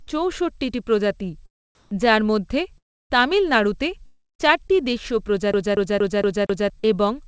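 A burst of packet loss opens this speech recording, between 0.02 and 0.20 s, where about 60 ms of audio never arrived and the receiver bridged roughly 53 ms of it by extending the last sound and letting it fade, so a brief held buzz or fading hiss stands in for the missing piece before the speech resumes further on. Comfort noise in place of the background follows from 1.75 to 1.91 s. For 160 ms the real room tone, sitting about 30 dB below the loudest speech, gives way to a flat, featureless noise about 2 dB different in level, most likely because the sender's voice detector paused transmission and the receiver synthesised a stand-in. A long network dropout runs from 2.78 to 3.12 s, with about 320 ms lost. The last sound is stretched into a decaying buzz or hiss, and then roughly 290 ms of near silence follows before speech returns with that stretch gone, most likely a network interruption rather than anything in the source. 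Sound chopped by the voice detector spans 4.06 to 4.82 s. About 342 ms of quiet syllables and word edges are swapped for synthetic noise, so the speech turns choppy, the likely cause being a voice detector repeatedly toggling transmission on and off. A CD stuck on one turn then produces the fast, even stutter of a skipping disc from 5.53 to 6.70 s: the same 0.23 s fragment plays five times, with a short mute at each jump as the laser is thrown back to the same point on every rotation. Short concealed packet loss closes out the problems at 6.80 to 6.95 s, where about 40 ms went missing and roughly 33 ms was filled by continuing the preceding sound before blending back, leaving a brief smear or wobble and about 15 ms of added length. Throughout, the audio carries nothing above 8 kHz, which fits a wideband call codec such as G.722.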